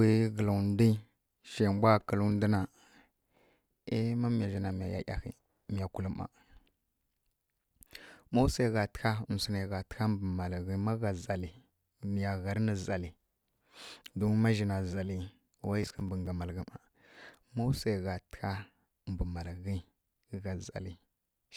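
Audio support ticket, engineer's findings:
Processor overload crackle, 15.83–16.27 s, just before "ga malghǝ". Gritty tearing burst over speech. CPU missing consecutive buffer deadlines, roughly seven in a row, each filled with stale held audio, hard edges; fits buffers of around 10 ms. Clears when load drops.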